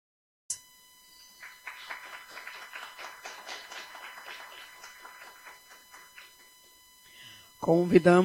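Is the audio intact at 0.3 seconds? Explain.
No. A cut-off start leaves 0.0 to 0.50 s as digital silence: a flat waveform and blank spectrogram, then sound begins abruptly mid-sound with a vertical edge.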